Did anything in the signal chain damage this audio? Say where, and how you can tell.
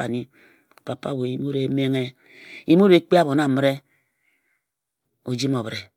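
No, nothing along the chain left an audible mark on this speech, and there is no stage to point to.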